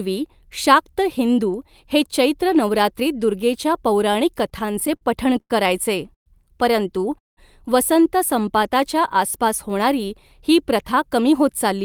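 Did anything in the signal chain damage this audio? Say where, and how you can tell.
Yes, network-side repeated stalls (stutter) between 4.43 and 5.52 s: ten brief holds, the longest 95 ms, fill about a fifth of that span. The jitter buffer kept running dry.

Two call audio freezes, at 6.14 to 6.28 s and 7.18 to 7.39 s: the last sound fades to silence, then speech resumes intact. The likely cause is delayed packets starving the buffer.

A jitter buffer slow-down from 8.36 to 9.18 s, ending just before "आसपास होणारी ही प्रथा", plays speech at 95% with unchanged pitch. Repeated pitch periods add 45 ms.

A jitter buffer speed-up from 11.18 to 11.79 s, after "आसपास होणारी ही प्रथा", runs at 106% at the same pitch. About 40 ms of periods were dropped to cut delay.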